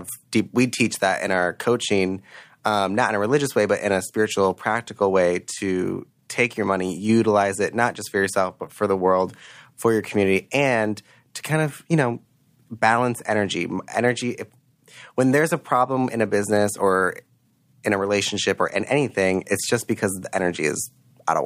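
No technical faults are audible.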